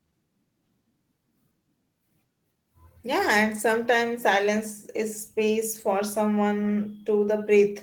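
Nothing goes wrong anywhere in this bit of speech, so there's no fault to point to at any moment.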